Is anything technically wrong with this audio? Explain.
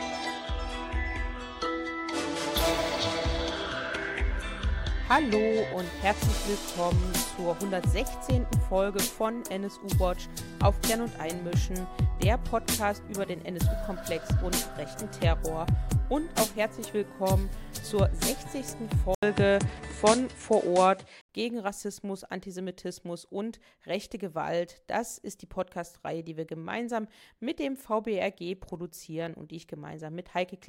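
Yes. From 19.15 to 21.29 s, after a brief 80 ms dropout, the audio turns duller, with nothing above 10.5 kHz, a level shift of roughly 5 dB and a new low noise floor. This is likely an input switched to a poorer device with a narrower band.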